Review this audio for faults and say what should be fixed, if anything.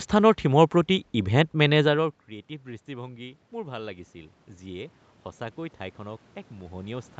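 Automatic gain rising is the fault here. From 2.85 s to the end at about 7.2 s, the level swells steadily, with the voice and the room noise lifting together. The input had dropped by about 20 dB, consistent with the talker moving back from the microphone around 2 s. The gain control read that as too quiet and slowly raised its gain to compensate, which pumps up the background along with the speech. To prevent it, cap the AGC's maximum gain and slow its attack, or keep the talker at a steady distance from the microphone.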